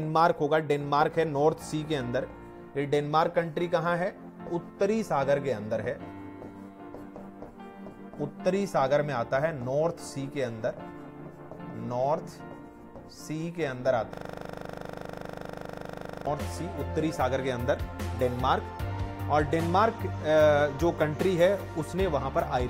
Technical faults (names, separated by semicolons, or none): system hang loop